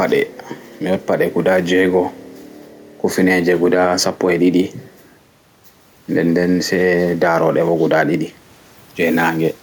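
Throughout the speech, the gain swings around 5 dB, pulled down under each loud syllable. This is gain pumping, likely from excessive gain driving a fast limiter.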